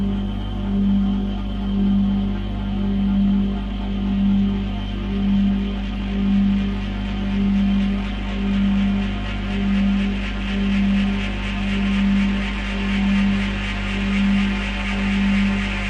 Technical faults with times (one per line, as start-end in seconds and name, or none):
none